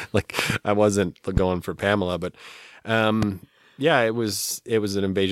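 Loud pops interrupt this speech clip at 0.39 to 0.52 s (a double pop, about 20 dB above the speech), 1.37 to 1.39 s and 3.23 to 3.25 s (each about 15 dB above), likely from voltage steps such as a plug, switch, static or driver glitch, while the speech continues underneath.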